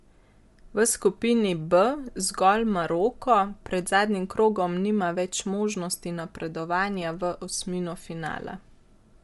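Speech runs the whole clip with plainly audible codec damage: the voice has a breathy, grainy edge, and nothing remains above 11.5 kHz. The likely cause is Bluetooth LC3 compression, which drops much of the upper spectrum and refills it with noise. The texture fits 10 ms frames at around 48 kbps. A spectrogram would show a flat ceiling at 11.5 kHz, with speckled noise in place of clean harmonic streaks beneath it.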